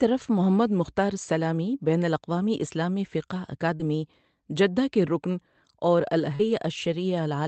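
At 3.75 s and again at 6.35 s, short concealed packet loss: about 40 ms went missing each time. The decoder filled the gap by extending the preceding speech, heard as a brief smear.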